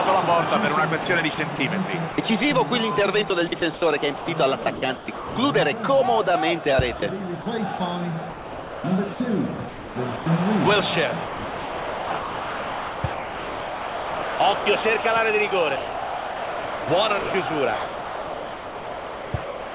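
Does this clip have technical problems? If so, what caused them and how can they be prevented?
Yes. The worst of it is sound chopped by the voice detector, in six stretches: 1.02 to 1.58 s, 3.28 to 5.36 s, 7.0 to 7.8 s, 8.3 to 10.26 s, 11.24 to 15.04 s, and 15.76 s to the end. In each one the sound keeps cutting in and out. The gaps add up to about 0.1, 0.7, 0.08, 0.98, 3.1 and 3.19 s. The late stretches are mostly comfort noise rather than real signal. The likely cause is a voice detector at the sending end that keeps deciding quieter passages are just background and stops sending them. Lower the detector's sensitivity threshold, add more hangover time, or turn it off entirely on a clean link.

There's also one short spot of sound dropped by the voice detector, from 2.12 to 2.18 s. There, 60 ms of real sound is swapped for steady comfort noise before the signal comes back. It's the same mechanism, with the detector likely misreading a soft tail as silence. 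It just happens once and briefly instead of flickering. The codec's bandwidth, which stops at 4 kHz as you'd expect from G.711 A-law, isn't behind any of this. The same fixes apply: a gentler threshold, a longer hangover, or no voice detection at all.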